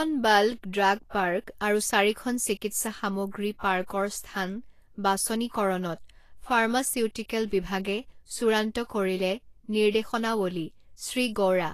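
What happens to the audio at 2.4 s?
At 2.4 s you're hearing the same Vorbis compression damage that runs through the whole speech clip: hissy, grainy treble with nothing above about 14.2 kHz, most likely from a low-bitrate encode around 34 kbps quantising detail into noise.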